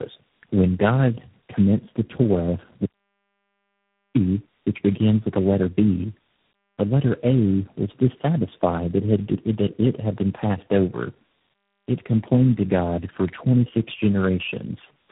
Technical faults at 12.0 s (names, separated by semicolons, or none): tandem speech coding